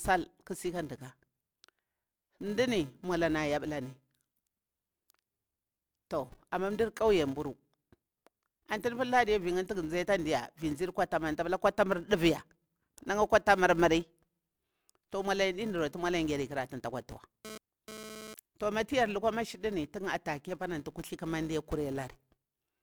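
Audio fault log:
Throughout: filter restarted on every block. The filter drops its memory at each block boundary and starts again from silence, so every block opens with a small transient. These ticks repeat at 375 Hz, which fits a 128-sample block, and merge into a buzz that swells and fades with the speech level. A spectrogram shows a 375 Hz line with harmonics that brightens in loud passages, and a zoomed waveform shows tiny discontinuities at regular block edges.
17.45–18.34 s: GSM phone buzz. A nearby 2G phone sends radio bursts during a data transfer, and the audio circuit rectifies them into a hard, raspy buzz at about 217 Hz, roughly 14 dB below the speech and unrelated to it. Because it is a data transfer, the buzz comes and goes rather than holding steady. A spectrogram shows stacked harmonics at multiples of 217 Hz, and the waveform shows a comb of sharp, evenly spaced pulses.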